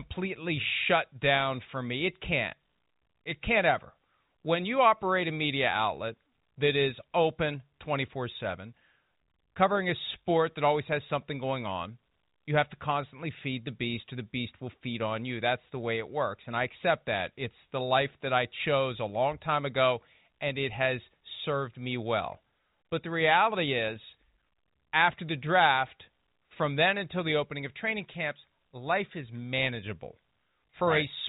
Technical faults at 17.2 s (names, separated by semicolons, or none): none